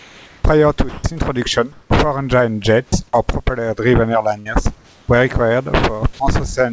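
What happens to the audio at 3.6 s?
Nothing goes wrong at 3.6 s: the speech passes through intact, with no dropout, glitch or distortion at that point.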